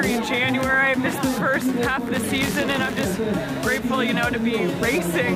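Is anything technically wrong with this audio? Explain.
Yes. Buffer tearing runs from 2.15 to 3.03 s. The software filling the playback ring buffer and the hardware reading it have drifted out of step, so their positions cross inside every period. A small slice of each period, around 2 percent, is replayed from about 20 ms earlier, with hard joins on both sides. Those joins repeat at 100 Hz and produce a steady robotic buzz tied to the signal throughout that span.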